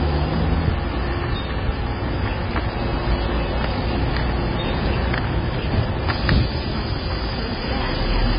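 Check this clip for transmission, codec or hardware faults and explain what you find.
There is one fault, present throughout: the sound is dull and smeared, with a fizzy, warbling texture on sustained parts and nothing above 5 kHz. The likely cause is heavy AAC compression, which fits AAC-LC at around 16 kbps. The encoder quantises coarsely against a hearing model and drops the top band. A spectrogram shows a hard ceiling at 5 kHz, with patchy holes and blotchy noise-filled bands beneath it.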